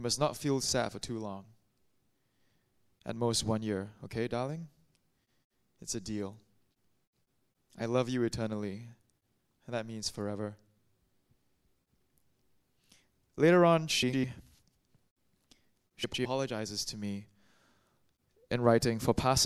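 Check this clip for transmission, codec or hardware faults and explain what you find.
Two short stretches of frames out of order are audible, at 14.02 to 14.25 s and 16.04 to 16.26 s. In each, two neighbouring blocks of about 104.5 ms, which fits runs of four frames apiece, were received swapped and decoded in that order, so the later half plays before the earlier. The result is a brief garbled flutter. Nothing is dropped, and the timing stays intact.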